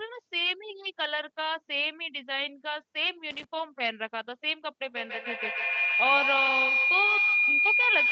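A burst of scratchy crackle from 3.31 to 3.44 s is loose connector crackle: a worn or dirty contact briefly broke and remade the signal path.

From 4.84 s to the end, a feedback howl rises to about 4 dB above the speech, ringing around 2 kHz and pulsing roughly every 150 ms, as a microphone-to-loudspeaker loop kept gaining level.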